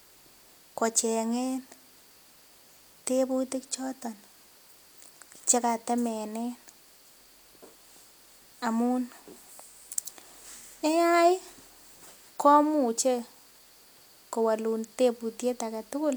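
Nothing goes wrong anywhere in this bit of speech, so there's no technical fault to walk through here.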